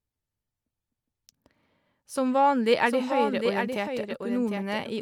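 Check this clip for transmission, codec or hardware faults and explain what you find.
One fault is present, a doubled audio track. From 2.86 s to the end, a second copy of the speech enters abruptly and runs about 0.7 s behind the original, a few decibels quieter. It is full-band and dry, with no decay or room colour, so it sounds like a distinct overlapping repeat rather than an echo. The likely cause is the same signal being captured again through a slower path and mixed back in.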